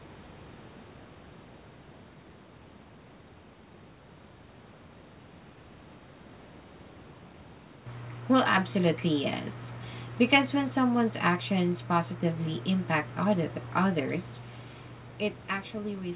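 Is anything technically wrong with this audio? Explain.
No, nothing technically wrong can be heard in this speech.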